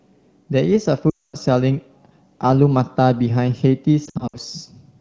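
Speech carried over AMR wideband (HD Voice), with only light coding damage. Lost AMR speech frames break it twice. From 1.10 to 1.36 s, 240 ms of frames are gone in a row. The sound drops to near silence within two frames, and the voice returns weak. From 4.05 to 4.37 s, 160 ms of frames drop out in short gaps, the longest 60 ms. These cause brief dips and warbles. Radio errors failing the frame checksum are the cause.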